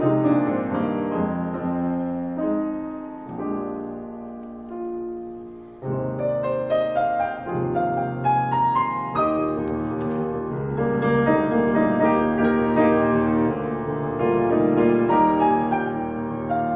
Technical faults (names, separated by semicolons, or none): none